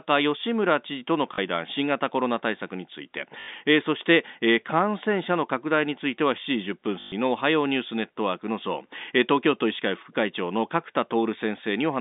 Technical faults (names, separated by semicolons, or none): packet loss with last packet repeated